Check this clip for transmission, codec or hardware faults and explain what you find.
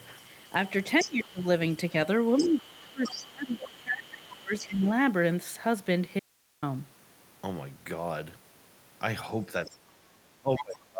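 Three kinds of fault are audible in this speech: echo from the far end leaking through, the talker being pushed down during double talk, and one short dropout to hiss.

Other side's voice leaking through, 0.00 to 1.11 s, 1.71 to 4.89 s, 9.65 to 9.70 s and 10.57 to 10.78 s. A second voice sits underneath, roughly 10 to 15 dB below the talker in the longer stretches and much fainter in the brief 9.65 s scrap. The likely cause is loudspeaker sound reaching the microphone that the echo canceller failed to subtract. On a spectrogram it appears as a faint, independent harmonic pattern that does not line up with the main speech.

Speech suppressed in double talk, 1.04 to 1.43 s, 2.39 to 4.85 s, and 9.47 s to the end. While both sides overlap, the talker's level sinks by as much as roughly 25 dB. The canceller likely could not tell near speech from echo, so it attenuated everything. In the waveform the envelope dips in those stretches.

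Audio dropout to a faint residue, 6.20 to 6.62 s. The speech cuts off abruptly for about 0.43 s, leaving only hiss around 40 dB below the signal before the speech returns in mid-flow. This is likely a brief loss of the incoming signal while the downstream path stayed live. The waveform shows a hard-edged near-flat gap, and the spectrogram shows a band of faint broadband noise with sharp vertical boundaries, unlike a natural pause or fade.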